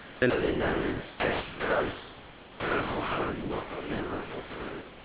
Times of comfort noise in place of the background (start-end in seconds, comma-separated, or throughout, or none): 0.00-0.22